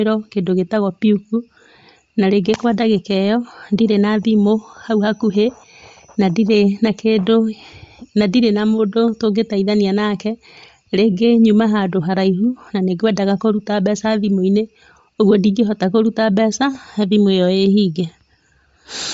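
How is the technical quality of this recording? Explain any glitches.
The recording carries plainly audible codec damage from start to finish. Bluetooth LC3 compression, throughout: the speech is likely coded by LC3, which fits around 32 kbps with 10 ms frames. Nothing above 7.7 kHz survives, and the thinned upper band is noise-filled, giving the speech a breathy, grainy edge.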